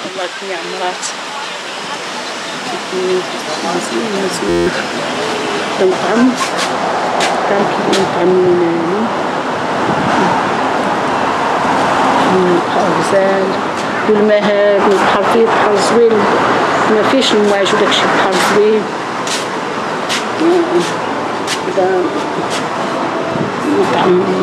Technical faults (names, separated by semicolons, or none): system hang loop